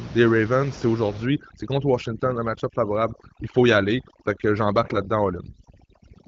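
From 1.26 s to the end, overdone noise removal takes hold. The suppressor, set far too aggressively against room noise sitting about 17 dB below the speech, drives individual frequency bins near its noise estimate down or off, stripping quiet speech detail along with it. The background drops and breaks up into twinkling musical-noise specks. On a spectrogram the noise floor goes dark with scattered isolated bright points, and the speech harmonics look ragged at their edges.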